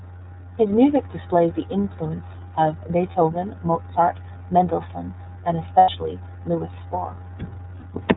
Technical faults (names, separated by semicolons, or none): iLBC codec; lost iLBC frames